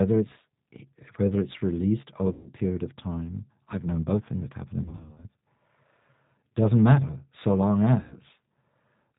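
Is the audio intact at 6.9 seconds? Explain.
No. At 6.9 seconds, as throughout the speech, the G.729 codec is at work, and its damage is plainly audible. The speech is rebuilt from a vocal tract model, a pitch predictor and a few pulses per half of each 10 ms frame, so it sounds rough and slightly synthetic, with nothing above 4 kHz. A simple telephone-band filter would only dull the sound, not add this buzzy, artificial texture, which fits an 8 kbit/s rate.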